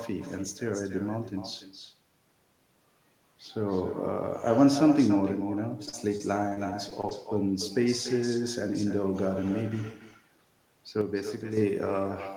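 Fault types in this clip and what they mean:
echo with no canceller: Throughout the speech, every phrase is trailed by a quieter, thinner copy about 11 dB down, arriving roughly a third of a second later. The far end's loudspeaker feeds its microphone and nothing subtracts that return path.
repeated packet loss (robotic sound): From 5.85 to 7.13 s the speech turns choppy, with repeated short holes, the longest about 36 ms. Lost or late packets kept recurring, and each gap was patched by extending the preceding sound.
sudden gain jump: Between 11.01 and 11.57 s the speech and its background noise drop together by about 6 dB in one abrupt step rather than a fade, likely from a digital gain setting applied instantly without any ramp.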